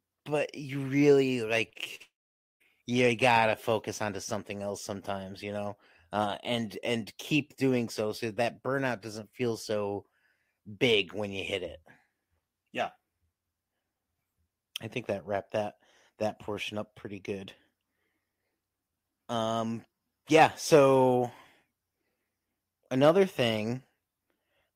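From 1.69 to 2.02 s the speech turns choppy, broken by four brief holes, the longest about 47 ms. This is repeated packet loss (robotic sound): about 100 ms of audio never arrived, and each gap was patched by stretching the preceding sound.

At 2.02 s a brief tail of the last sound fades into roughly half a second of silence before the speech resumes at 2.62 s, with about 0.58 s missing. The likely cause is a long network dropout, where nothing reached the receiver and the lost stretch was never played.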